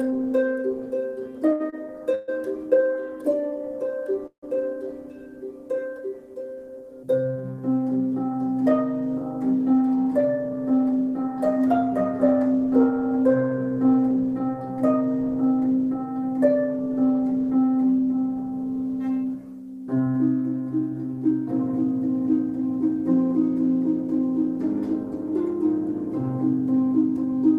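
Between 1.49 and 2.30 s the audio drags and stutters: it hangs four times, the longest hang lasting 133 ms, with about 244 ms of filler making up roughly 30% of that stretch, yet nothing seems to be lost. These are repeated stalls (stutter). Packets kept arriving late or too slowly for playback, so the jitter buffer emptied again and again, and each time the receiver stretched the last sound, fading it on the longer waits, until fresh audio came in. At 4.26 s the sound halts for 162 ms, ending at 4.44 s. The held sound dies away into about 100 ms of silence, and then the audio resumes exactly where it stopped. This is a call audio freeze, likely caused by packets held up in transit that drained the jitter buffer. The receiver bridged the hole with a decaying continuation, so the gap adds a fixed 162 ms of delay rather than cutting anything out. From 9.66 to 11.16 s the audio runs noticeably fast, at 109% of normal speed, yet without any rise in pitch, so it comes across as hurried. 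This is a jitter buffer speed-up. Too much audio had built up in the buffer, as happens after delayed packets land together, and the receiver trimmed many tiny pitch-period-sized slices in succession, removing around 150 ms in total to pull the delay back down.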